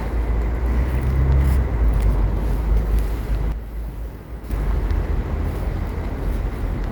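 At 3.52 s the sound and its background drop together by about 8 dB, recovering at 4.50 s: a sudden gain jump, likely an unramped digital gain change.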